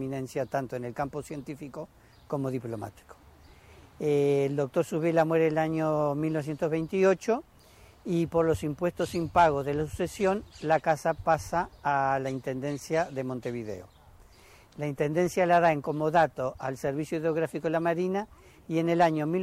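No technical faults can be heard anywhere in the signal.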